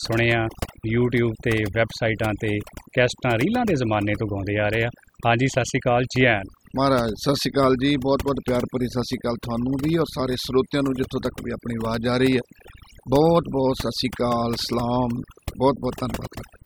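Throughout the speech, the background sinks to near silence dotted with twinkling specks: overdone noise removal, with quiet voice detail cut away as noise.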